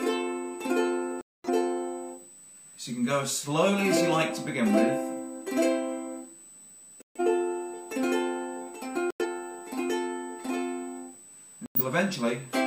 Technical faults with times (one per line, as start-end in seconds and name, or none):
0.00-12.67 USB whine
1.21-1.49 corrupt frame muted
7.02-7.20 corrupt frame muted
9.11-9.26 corrupt frame muted
11.66-11.81 corrupt frame muted